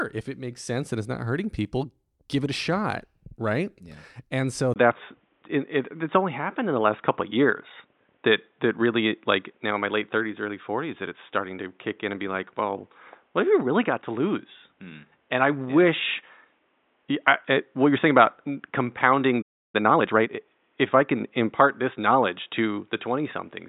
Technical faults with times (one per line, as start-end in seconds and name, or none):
4.74-23.68 input switched to a poorer device
19.41-19.75 playback stall
19.75-20.39 time-compressed catch-up